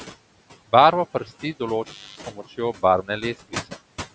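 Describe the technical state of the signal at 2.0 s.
At 2.0 s the signal sits inside an intermittent contact fault running from 1.83 to 2.20 s, just before "s pomočjo". A loose connection in the line opens for about 290 ms, so the speech drops out or breaks up. Crackle marks the points where the contact breaks and remakes, and during the gap only faint hiss from the open line remains. The speech then resumes once the contact closes again.

Noise suppressor artifacts also apply at this point, as they do across the whole clip. The suppressor estimates which frequency bands hold steady background noise and pulls them down, by about 15 dB here, updating its decision frame by frame. The residual noise therefore pumps, dropping away in pauses and rising back under the speech. The call microphone processing band-limits everything to 8 kHz, which is normal for that path.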